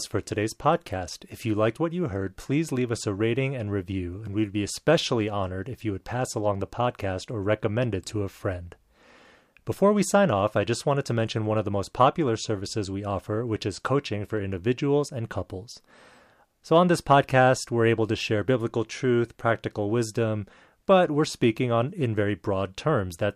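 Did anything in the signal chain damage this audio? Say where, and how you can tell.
Yes. The damage is in the clocking between two digital devices, likely a converter and the system it feeds running on separate clocks that are never synchronised. From 0.24 s to the end of the clip, faint ticks recur about every fifth of a second, around a hundred in all, each one a single dropped or repeated sample. That steady spacing points to a clock mismatch of roughly 100 parts per million. These are clock slip clicks, a regular tick laid over the speech.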